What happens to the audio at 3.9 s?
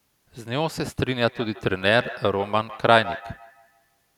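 At 3.9 s the speech is inside a feedback echo between two devices, running from 1.27 to 4.13 s. A second device replays the audio into the microphone, so it returns roughly every 150 ms, thinner and ringing, peaking at about 16 dB below the speech.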